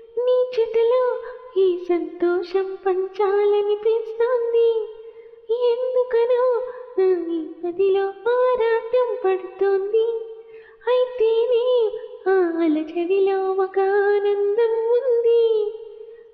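There are no technical faults to describe, so there is nothing to place in time order.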